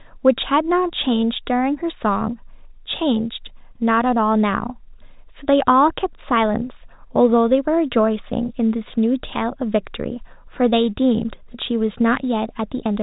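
No technical faults are audible.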